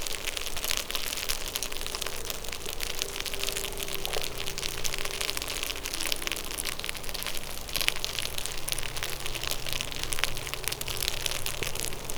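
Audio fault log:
3.73, 7.78 and 11.83 s: overlapping chunks. Each 4 s chunk begins 50 ms before the previous one ended, so that slice replays, giving a regular stutter at each join.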